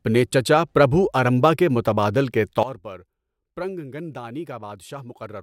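At 2.63 s, right after "ارمبا کے متبادل کے", a sudden gain jump drops the level by about 17 dB and it stays down to the end. Speech and background noise fall together in a single step, likely a digital gain change applied without a ramp. A fade or compressor would glide instead.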